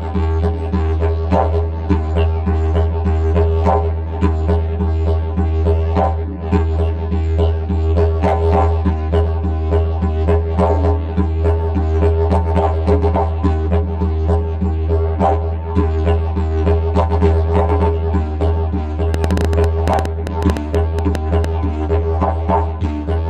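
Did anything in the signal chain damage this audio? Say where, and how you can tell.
Yes. From 19.14 to 21.45 s there's a train of clicks, about twenty of them at roughly 8.3 per second, unevenly spaced and peaking about 10 dB above the audio. It's likely interference pickup in the analogue wiring or a struggling interface injecting pulses.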